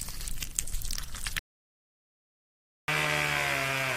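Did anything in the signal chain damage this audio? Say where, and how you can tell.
Yes. The input feeding the recorder was likely interrupted, through a lost device connection, a failed link or a brief mute, while the capture stage kept writing silence. The result is an audio dropout to silence from 1.39 s to 2.88 s. The sound stops abruptly mid-flow and returns just as abruptly about 1.49 s later. The gap is silent with no room tone or noise floor underneath it, which points to missing input rather than a quiet passage. Whatever occurred during that stretch is lost.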